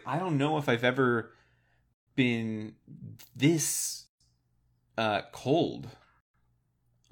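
Speech clip with a gap at a join of encoded pieces, recurring roughly every 2 s: silent drops at 1.94–2.07 s, 4.07–4.21 s and 6.21–6.34 s, each around 133–136 ms. The segments were encoded separately and butted together untrimmed, so encoder delay and end padding leave holes with smeared edges before the speech resumes.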